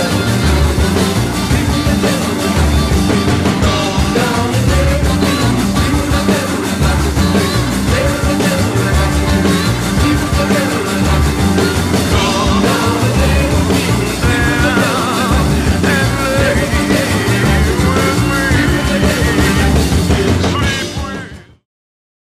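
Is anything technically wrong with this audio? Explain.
No, nothing technically wrong can be heard here.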